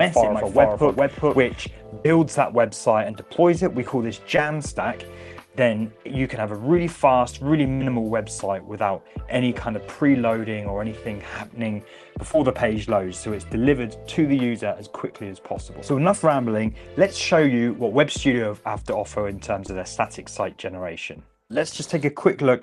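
From the very start until 1.66 s, a doubled audio track is running: a second, full-band copy at about the same level trails the original by roughly 0.4 s, and it cuts off abruptly at 1.66 s. Unlike an echo or reverb, it has no decay and no room colour, so the most likely cause is the sound being captured a second time through a slower path, or an edit holding two copies out of step.

Short concealed packet losses follow at 2.03–2.06 s, 4.37–4.39 s, 12.32–12.35 s and 19.67–19.69 s. At each, a sliver of audio never reached the decoder in time, and the receiver filled the gap for 11 to 17 ms by continuing the preceding sound before blending back. Each one is heard as a brief smear or wobble, not a dropout.

A burst of packet loss at 7.75–7.81 s is longer than those short losses. The last sound is stretched for about 52 ms and fades as it goes, and when the audio resumes, about 40 ms of material has been skipped. 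That longer, fading fill is what separates it from the shorter losses.

All of this rides on a call path whose coding noise and top end, limited to about 12 kHz, point to Opus at around 32 kbps.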